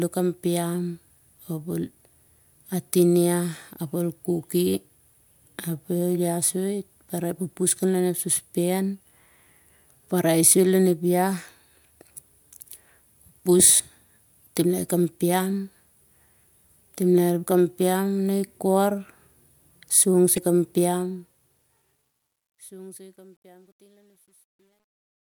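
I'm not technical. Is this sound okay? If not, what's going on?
No. There are two problems near the end of this speech clip.

At 20.34 to 20.38 seconds there is a short blip or squawk. This is damaged data in a compressed stream. A small piece of the stored file is broken. The player cannot read that piece, loses its place, and jumps to the next part it can read. You hear a tiny glitch.

From 20.82 seconds to the end, the sound gets gritty. This is truncation distortion on a fade. The voice is faded out from about 21 seconds. But the volume step keeps too little detail, which points to roughly 11 bits, with no added noise to smooth it. As the voice gets quiet, it turns rough and steppy. From 22.49 seconds to the end it is at its worst.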